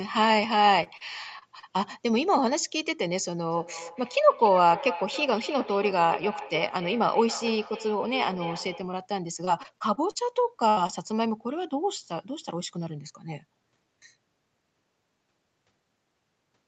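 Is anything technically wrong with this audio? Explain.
Yes. Short concealed packet loss at 0.83–0.87, 0.97–1.02, 1.39–1.43, 1.59–1.65 and 10.87–10.91 s: 20 to 40 ms of audio arrived too late, and the receiver extended the preceding sound, leaving brief smears or wobbles.

Feedback echo between two devices from 3.51 to 9.01 s: a second device plays the call back into a nearby microphone. The sound returns roughly every third of a second, at about 12 dB below the main level, growing thinner and more ringing.

Repeated packet loss (robotic sound) from 9.45 to 10.17 s: a handful of gaps up to 40 ms each were patched in quick succession. About a sixth of the stretch is filled-in sound, which makes it choppy.

Burst of packet loss from 10.69 to 10.79 s: about 80 ms went missing in one run. The concealment stretched and faded the last sound into a brief buzz or hiss before the audio resumed further on.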